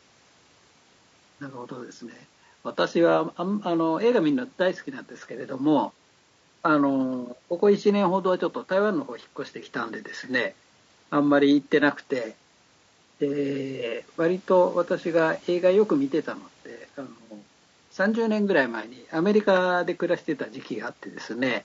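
Throughout, the speech sounds rough and grainy. This is likely low-delay AAC compression. Its short frames resolve pitch harmonics poorly, fitting about 32 kbps.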